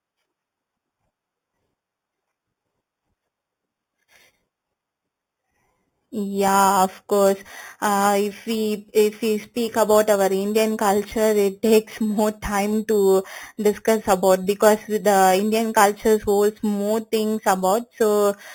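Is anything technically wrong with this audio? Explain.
Yes. Throughout the speech a bright, metallic fizz rides on top of the audio and rises and falls with it. Its lowest band sits between 4 and 8 kHz, about 17 dB below the speech, and moves opposite to the pitch. This is imaging from sample-and-hold upsampling. Each sample was simply repeated with no smoothing filter, which fits audio at an 8 kHz rate raised to 48 kHz, leaving mirrored copies of the spectrum around each multiple of 8 kHz.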